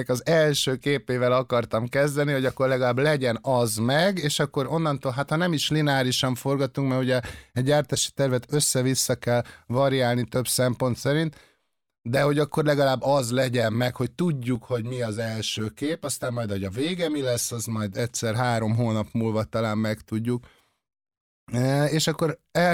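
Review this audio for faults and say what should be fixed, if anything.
Channel delay (comb filtering) runs from 14.55 to 17.99 s, between "az legyen meg hogy" and "három hónap múlva talán". One channel lags by around 10 ms, so the mono sum cancels at fixed notches starting near 50 Hz, leaving the speech hollow and phasey. Aligning the channels or capturing from a single source before any mono fold-down would prevent it.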